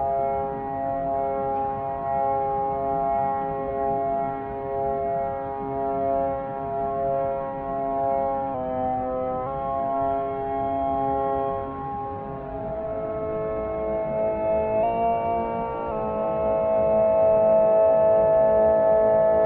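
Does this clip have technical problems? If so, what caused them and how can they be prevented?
Yes. From 14.83 to 15.92 s the audio speeds up by about 5.9 percent and rises nearly a semitone, then snaps back. This is a drift correction step. Clock-matching software likely changed the playback rate at once to drain its buffer. Prevent it with gradual, small rate adjustments.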